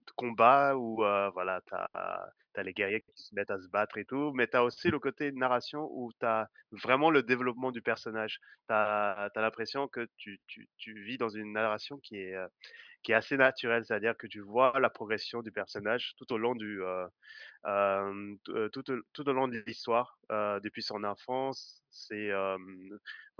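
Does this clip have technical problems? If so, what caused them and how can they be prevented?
No technical faults are audible.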